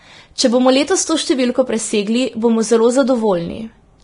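From start to finish the speech sounds hissy and grainy, with sibilants and other high detail turned into a rough wash of noise, voiced tones coarsened, and consonant onsets smeared. Nothing is present above 10.6 kHz. The likely cause is heavy Vorbis compression at a low setting, around the level of 31 kbps: the encoder discarded the top band and quantised the remaining treble so coarsely that its fine structure became noise of similar energy.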